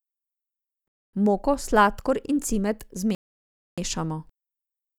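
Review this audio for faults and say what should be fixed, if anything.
Two rebuffering stalls interrupt the speech, at 0.88–1.14 s and 3.15–3.78 s after "sladkor in cimet". Playback starved, went silent, then resumed intact, adding 0.25 s and 0.63 s. A larger playback buffer or a lower streaming bitrate would prevent this.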